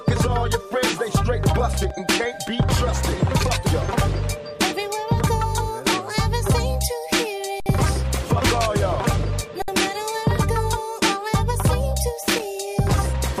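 There are two kinds of trouble in this audio. First, a loose connector crackle shows up twice, from 1.74 to 1.91 s and again from 12.23 to 12.42 s, each a short, ragged burst of scratchy crackle lasting a bit under 0.2 s. That's a worn or dirty contact making and breaking as something shifts, so the signal gets chopped on and off, and any DC sitting on the line turns those breaks into little pops. Second, there are two underruns with a held sample, at 7.60 to 7.66 s and 9.62 to 9.68 s, each a 60 ms dropout. The output buffer ran dry and the converter just sat on its last value, so the waveform flatlines, usually somewhere off zero, and the sound simply stops without much of a click. Playback then picks up right where it left off, with essentially nothing skipped, so the return is soft rather than a hard snap.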